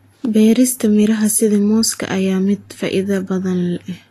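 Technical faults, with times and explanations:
throughout, Vorbis compression: likely low-bitrate coding, around 33 kbps, removes all content above 14.2 kHz and quantises the treble coarsely, leaving the speech hissy and grainy.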